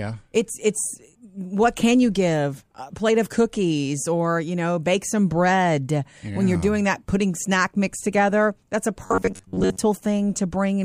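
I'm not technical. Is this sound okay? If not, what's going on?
No. Right after "mix together that's a", from 9.06 to 9.79 s, the speech becomes a stiff metallic buzz at 94 Hz. This is robotic sound from repeated short buffers, likely from audio arriving too slowly. Tiny slices get replayed over most of that stretch, whereas a plain dropout would leave silence.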